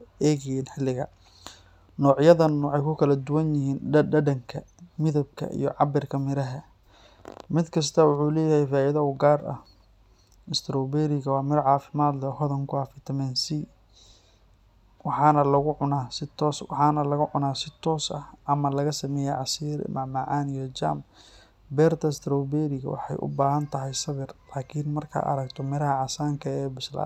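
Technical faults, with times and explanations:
No technical faults are audible anywhere in this speech recording.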